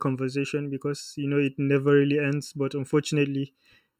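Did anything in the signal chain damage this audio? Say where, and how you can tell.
Yes: channel delay (comb filtering) at the buffer stage. One channel lags by under a millisecond before the mono sum, leaving the speech hollow throughout, with evenly spaced spectrogram notches starting near 700 Hz.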